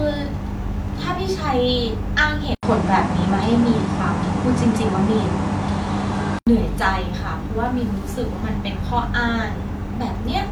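At 2.55 s the speech drops out for about 80 ms, then returns duller and boxier, with nothing above 10.8 kHz, a level shift of a few decibels and new background noise sitting roughly 30 dB under the voice. At 6.47 s the fuller sound comes back. This is likely an input switched to a poorer device, a second microphone or headset path with narrower bandwidth and its own noise and gain.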